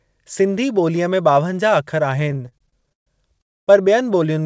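Speech, carried over a call link whose band stops at 8 kHz, as a G.722 wideband codec would produce, breaks up from 2.20 to 3.41 s in repeated stalls (stutter). Packets kept arriving too late for playback, so the jitter buffer ran dry 19 times. Each time the receiver stretched the last sound to bridge the wait, filling about 377 ms in all (roughly a third of that stretch), with the longest hold at 138 ms. Nothing is lost, but the speech drags and judders. A spectrogram shows smeared, frozen harmonic bands repeating between brief normal patches. The waveform shows flattened, repetitive segments. At 3.41 s this gives way to a call audio freeze lasting to 3.69 s. The continued sound fades out almost at once, leaving about 250 ms of silence before the speech resumes where it stopped. This points to a delay jump of about 259 ms on the network, likely from packets held up in transit. On a spectrogram it shows as a blank vertical band, and on the waveform as a flat gap.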